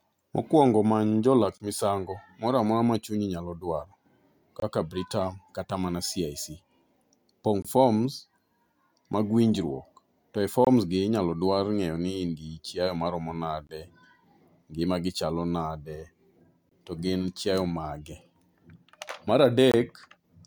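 Gaps between chunks interrupt this speech clip at 1.58, 4.60, 7.62, 10.65, 13.67, 16.69 and 19.72 s. Each is a 23 ms hole recurring every 3 s, so the audio was delivered in 3-second chunks with silence inserted at each join, not lost.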